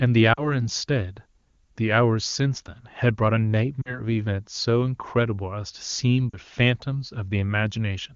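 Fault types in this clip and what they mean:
Lost AMR speech frames: Radio errors corrupted bits of the speech stream, so the decoder filled each gap by reusing the last good pitch and vocal tract settings at falling gain. It happens three times, around 0.33 to 0.62 s, 3.82 to 4.01 s and 6.30 to 6.38 s. Each is a short fade toward near silence of about 40 ms, which fits a pair of 20 ms frames, then the speech returns briefly weak or rough through the clean-sounding HD Voice wideband codec.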